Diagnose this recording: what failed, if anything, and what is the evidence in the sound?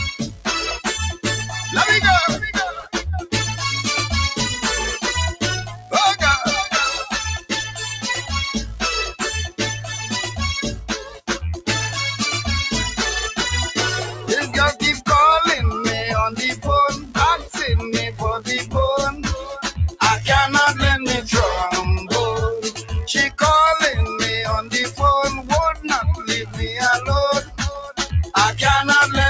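The failure is in the call processing stage. A speech noise suppressor applied to music or sounds stays active throughout, on a path that already carries nothing above 8 kHz. Held tones and decaying tails sink while attacks pass, so level pumps by around 10 dB. Unlike a compressor, it tracks steadiness, not loudness.

The sound cut by the noise suppressor is clearest at 0.13–1.25, 2.74–2.95, 5.67–5.93, 7.38–11.68, 14.11–15.07, 16.54–20.01, 22.67–23.4 and 24.62–28.34 s. Drops reach about 13 to 17 dB, deepest at 7.38–11.68 s. The sound thins and fades rather than breaking off, which distinguishes this from packet-loss dropouts.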